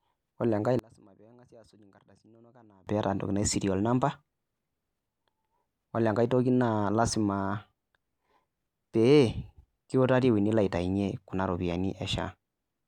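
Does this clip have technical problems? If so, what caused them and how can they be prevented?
Yes. From 0.79 to 2.87 s the speech nearly vanishes in mono, dropping about 30 dB, likely from one channel inverted. A faint residue remains, unlike a true dropout. Check channel polarity and monitor in mono before export.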